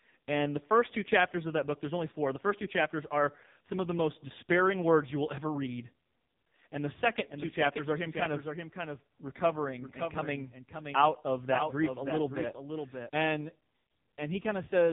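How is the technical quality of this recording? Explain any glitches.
The recording has poor technical quality. Two faults stand out: narrowband mobile coding throughout and a doubled audio track in the second half.

The AMR narrowband mobile codec colours the whole clip. Nothing above 3.8 kHz survives. The codec models the vocal tract and drives it with a pitch predictor and a few pulses per 5 ms frame. Here the coding damage is heavy. The speech sounds buzzy and synthetic, which points to a very low mode, around 5 kbps.

A doubled audio track runs from 7.29 s to 13.09 s, starting just after "and the second". A second full-band copy of the speech trails the original by roughly half a second. It sits about 5 dB lower. It has no decay or room colour, so it sounds like a clean overlapping repeat. It starts and stops abruptly. The likely cause is either a second, slower capture path or an edit that left two copies out of step.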